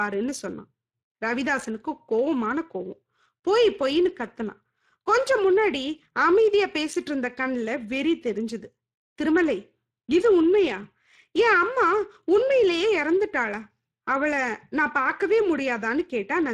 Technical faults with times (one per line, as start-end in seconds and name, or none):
0.00-16.53 Speex codec